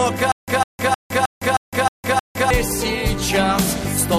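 The playback most likely stalled from 0.32 to 2.50 s, replaying its last buffered fragment at each retry before running dry. The result is a stutter with silent gaps: the same 152 ms burst of sound repeats seven times, each followed by about 160 ms of dead digital silence, giving an even 312 ms cycle. Whatever audio belonged in that stretch never plays and is lost.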